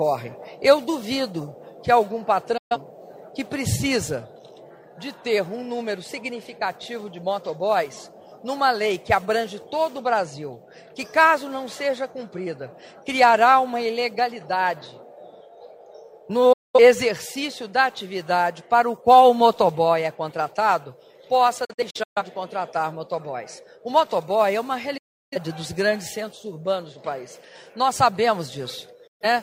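Digital broadcast dropouts silence the sound at 2.57, 16.53, 21.65, 24.97 and 29.07 s, as the receiver mutes on bad frames for 0.13 to 0.34 s. At 21.65 s the holes are scattered across half a second. Each mutes with an 8 ms fade and returns clean, without analogue hiss.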